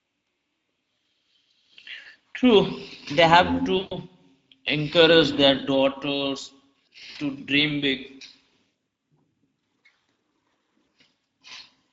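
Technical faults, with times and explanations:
Throughout, Speex codec: the speech sounds hoarse and grainy, which fits a mid-rate setting around 16.8 kbps, with too few bits for the excitation.
1.99–2.06 s, 3.77–3.97 s (after "they have"), 7.11–7.17 s (after "encourage their daughters"), VoIP packet loss concealed by the speech codec: 60, 140 and 40 ms gaps get smeared into a buzzy tone or coloured noise that fades, and the speech stays weak briefly afterwards.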